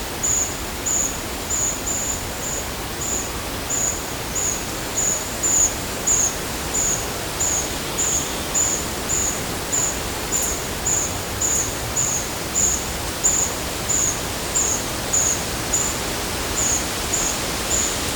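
There are no technical faults to describe in time order.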